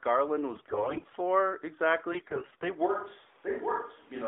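From 0.50 to 1.17 s and again from 2.12 to 2.70 s, the narrowband AMR speech turns hoarse, scratchy and gargly while pitch and level hold roughly steady. These are AMR bit errors: corrupted low-priority frame bits misplace the excitation pulses and skew the fine gain and spectral parameters. The second burst is harsher, consistent with a heavier error rate.

At 2.86 s the sound abruptly becomes roomy and hollow, loses bass, drops about 5 dB and picks up room noise about 25 dB below the speech, lasting to the end. This is likely a switch to a distant microphone.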